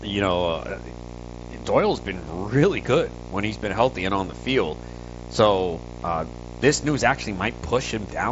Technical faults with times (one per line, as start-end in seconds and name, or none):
0.00-8.31 video or display buzz